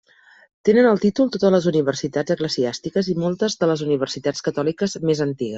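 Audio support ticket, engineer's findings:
Speech dull and gurgling across the whole clip, granular distortion on every phrase. Likely MP2 compression, with upper sub-bands starved of bits and switched off, remaining bands coarsely quantised; damage level fits a low bitrate near 80 kbps. Spectrogram: ragged high-frequency ceiling, upper bands blinking on and off in blocky patches, stepped band edges instead of a smooth rolloff. Waveform: little visible change, fault lives in the spectrum.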